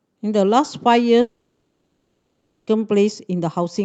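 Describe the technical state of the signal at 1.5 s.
At 1.5 s the signal sits inside a long network dropout that runs from 1.21 s to 2.69 s. Just after 1.21 s the last sound is stretched into a fading buzz for a few tenths of a second. By 1.5 s that has died away to near-silence, which lasts roughly 1.2 s. The likely cause is the receiver getting no packets and concealing the gap. Audio resumes at 2.69 s with the lost stretch simply missing.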